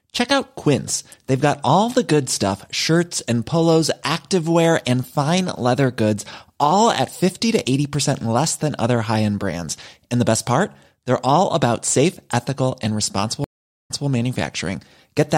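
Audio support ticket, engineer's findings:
Dropout after "safe ethical and responsible", 13.44 to 14.07 s. Roughly 0.44 s of silence, then speech resumes 0.18 s earlier, repeating a fragment with a soft fade-in. Stream reconnect: connection dropped, player reconnected, fresh decoder started mid-stream, server resent a short burst.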